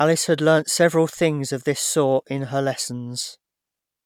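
No audible technical faults in this recording.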